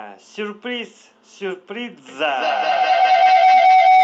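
Speech, with a feedback howl from 2.08 s to the end of the clip at 4.04 s. A microphone-to-loudspeaker loop gains level on each pass, repeating roughly every fifth of a second, and builds a tone near 700 Hz that peaks about 11 dB above the speech. On a spectrogram it shows as a bright, thickening horizontal line, and the waveform's envelope swells. The band tops out at 8 kHz from the call codec.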